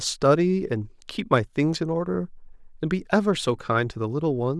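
No audible technical faults.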